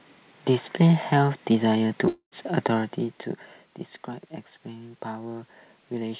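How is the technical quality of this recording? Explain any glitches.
One glitch stands out: a brief hole in the speech about two seconds in.

Long network dropout, 2.08 to 2.34 s: audio likely stopped arriving, so the last sound stretches into a fading buzz, then silence, and about 240 ms is lost.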